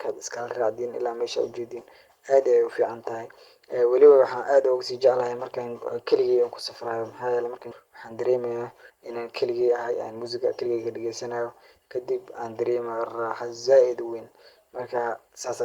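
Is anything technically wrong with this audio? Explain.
Yes, two faults are audible in this speech clip.

At 7.71 to 7.73 s there is a skip ahead. About a second of speech is missing. That stretch was dropped in transit or discarded when the jitter buffer overflowed, while later audio was already queued. Nothing fills the hole. The speech on either side is spliced almost directly together. The listener hears an abrupt jump forward, with part of the sentence gone and no pause.

From 7.83 to 12.62 s there is a jitter buffer speed-up. After the jump, the receiver was still holding more audio than its target delay. To drain the excess, it repeatedly cut out tiny pieces lasting one or a few pitch periods. Together these add up to about half a second. Playback runs at 110 percent speed while the pitch stays the same. The speech sounds rushed for nearly five seconds.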